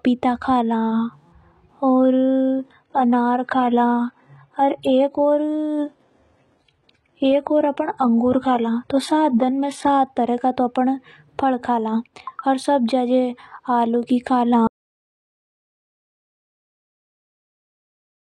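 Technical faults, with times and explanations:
1.89–9.89 s, adaptive stream at a lower bitrate: speech abruptly turns dull and swirly, spectrogram showing nothing above 11.8 kHz, fitting a switch to a low-bitrate HE-AAC version.
14.67 s to end, audio dropout to silence: speech cuts off mid-flow into flat silence with no room tone, likely from lost input.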